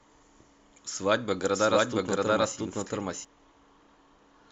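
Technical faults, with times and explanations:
1.55 to 3.25 s, doubled audio track: the speech picks up a second full-band copy trailing roughly 0.7 s behind at about the same level, with no decay or room colour, cutting in and out abruptly. Likely a slower second capture path or a misaligned edit.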